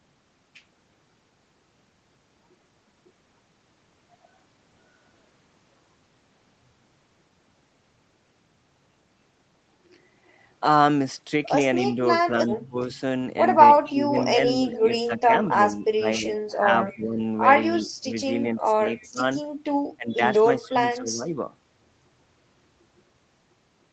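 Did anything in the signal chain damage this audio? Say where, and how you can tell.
Yes, the call processing stage took some hits. From 11.85 to 12.77 s the speech dips by up to about 20 dB, roughly 300 ms of it in all. Then from 13.87 to 21.31 s it keeps ducking and thinning, about 3 s affected in total. That's speech suppressed in double talk, most likely the echo canceller failing to separate the local talker from the far-end echo while both sides were talking, so it turned everything down.

There's also echo leak, a delayed copy of the speech trailing about 266 ms behind, at 13.84 to 15.55 s, 16.89 to 17.81 s, 18.96 to 19.08 s and 20.12 to 20.69 s. It starts about 15 dB below the speech, then drops to about 25 to 30 dB down. The likely cause is the far end's loudspeaker feeding its microphone, with residual echo slipping past its canceller and coming back to us.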